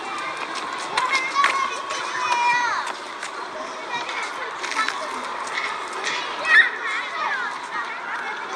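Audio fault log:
Nothing wrong turns up anywhere in these sounds, so there's nothing to log.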